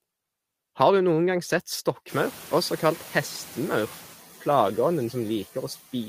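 At 2.09 s the noise suppressor falls behind: the room noise jumps by about 25 dB around the 2-second mark, to about 21 dB below the speech, and the suppressor's estimate of that noise takes close to 2 s to catch up. Until 4.08 s the louder noise behind the speech passes through with little reduction, then sinks by about 6 dB as the estimate adapts.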